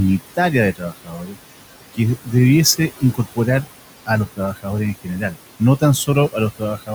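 From the start, you can hear noise suppressor artifacts. The room noise sits about 15 dB under the speech, and the suppressor pulls it down by about 17 dB between phrases, then lets it back up under the voice.

The suppressor also mistakes parts of the speech for noise. That speech cut by the noise suppressor hits four times: 0.73 to 1.38 s, with roughly half a second swallowed at up to about 17 dB; 3.01 to 3.38 s (about 11 dB); 4.27 to 4.66 s (about 16 dB); and 5.04 to 5.36 s (about 13 dB). Those bits sound faint or clipped off.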